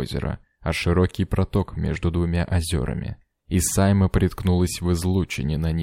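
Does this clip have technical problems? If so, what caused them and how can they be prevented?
No, the signal carries no audible technical faults, so there is nothing here that needs a cause traced or a fix applied.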